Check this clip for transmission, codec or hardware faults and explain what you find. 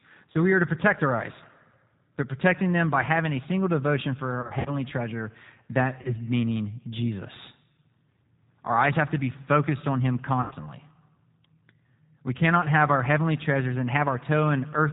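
The clip has two faults: low-bitrate codec damage throughout, and four short packet-loss dropouts.

The G.729 codec, here at 8 kbit/s, rebuilds speech from a vocal tract model and a few pulses per frame. Nothing above 4 kHz survives. The speech sounds muffled, slightly rough and synthetic, and the damage is plainly audible.

VoIP packet loss concealed by the speech codec occurs at 0.32 to 0.39 s, 4.41 to 4.71 s, 6.02 to 6.15 s and 10.42 to 10.54 s. The decoder filled each gap by extrapolating its last frame and fading it. The speech smears into a buzzy tone or coloured noise that fades, and it stays weak briefly after the gap. The gap near 4.4 s loses about 120 ms, scattered over 240 ms, with runs up to 60 ms. The gap near 10.4 s loses about 90 ms, which fits three 30 ms packets. The other two each lose 30 ms, which fits a single packet.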